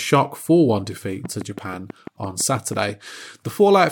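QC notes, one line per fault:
1.25–2.90 s, train of clicks: Something is likely injecting a short pulse into the signal path over and over, as interference from nearby equipment or an interface that keeps losing its footing would. About ten near-identical clicks arrive at a steady 6.1 per second, heard as even ticking laid over the speech and in the gaps between. Each peaks a few decibels above the speech, so they cut through plainly rather than sitting underneath it.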